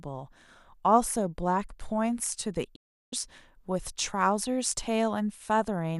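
A digital broadcast dropout runs from 2.75 to 3.13 s. The receiver stopped getting frames it could decode and muted, so the speech fades out within about 8 ms and falls silent for roughly 360 ms, consistent with around fifteen lost frames, before resuming mid-programme.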